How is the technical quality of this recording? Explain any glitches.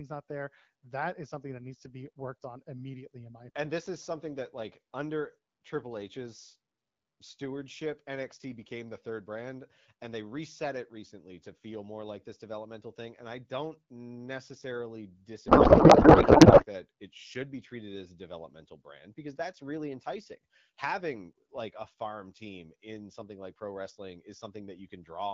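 There's one real glitch, a codec payload misread running from about 15.47 to 16.65 s, between "I don't necessarily" and "that it should be". For that stretch of a bit over a second, the speech turns into garbled noise and warble that barely tracks it. It sounds like the sender packed the AMR frames octet-aligned while the receiver unpacked them as bandwidth-efficient, so every field lands in the wrong place. The decoder faithfully renders nonsense until the framing lines up again. The underlying HD Voice coding sounds like AMR-WB at around 12.65 kbit/s, with only light coding texture.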